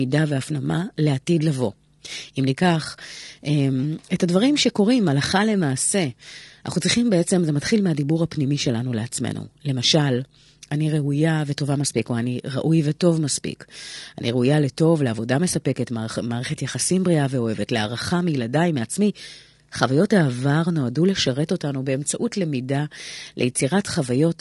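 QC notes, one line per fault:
Throughout, low-delay AAC compression: the speech was likely squeezed through AAC-ELD at a low bitrate, plausibly around 32 kbps, whose short frames blur pitch harmonics, so the voice sounds plainly rough and grainy, with noise filling gaps between harmonics and a dulled top band.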